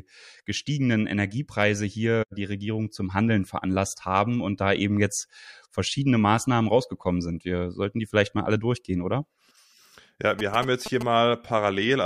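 Speech, with GSM signalling bursts from 10.39 to 11.03 s: a galloping run of short buzzes around 10 dB below the voice. A nearby 2G phone's signalling bursts, rectified by the audio circuit, repeat at 216.7 Hz, showing as vertical stripes and harmonic bands on a spectrogram and as clustered spikes on the waveform.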